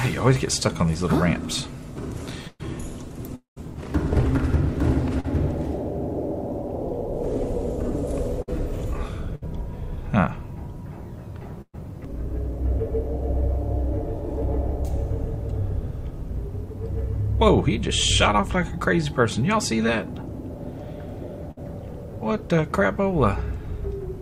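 Burst of packet loss at 2.47 to 2.61 s: about 120 ms of audio never arrived. The receiver stretched the last sound into a fading buzz or hiss, fell silent for about 20 ms, then resumed further on.

Long network dropout from 3.35 to 3.58 s: the sound continues as a decaying buzz or hiss for about 210 ms, then goes silent for about 130 ms, and about 220 ms of audio is missing when it returns. The cause is likely a stretch where no packets got through.

Short concealed packet loss at 5.20 to 5.26 s: about 40 ms went missing. The decoder patched the gap with roughly 37 ms of extended sound before blending back, which comes across as a brief smear or wobble.

Burst of packet loss at 8.42 to 8.49 s and again at 9.35 to 9.44 s: each time about 60 ms of audio was lost. It was filled by continuing the previous sound, heard as a short held buzz or fading hiss, and playback then skips ahead past the missing part.

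Burst of packet loss at 11.62 to 11.75 s: about 120 ms disappeared. The concealment carries the last sound forward as a fading tone, drops to silence for about 50 ms, and then jumps ahead.

Burst of packet loss at 21.51 to 21.59 s: another loss of about 60 ms, bridged by an extended, fading copy of the preceding sound before the audio resumes.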